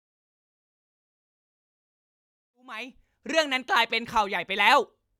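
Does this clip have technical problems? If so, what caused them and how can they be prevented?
No, nothing faulty here; the speech fades in smoothly from around 2.5 s to 3.28 s, an ordinary editor's fade with no click or hard edge.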